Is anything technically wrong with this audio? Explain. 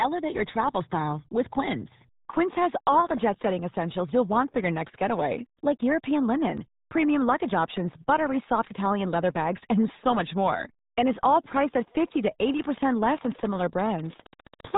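Yes. Throughout the speech, the audio has been through the RealAudio 14.4 codec, a dial-up-era speech coder. Nothing above 3.8 kHz survives, so the voice sounds muffled and gargly. That heavy damage points to a bitrate near 8 kbit/s, where the coder keeps only a crude model of the voice. On a spectrogram, energy stops at a flat ceiling near 3.8 kHz, and the remaining harmonics look smeared and blotchy.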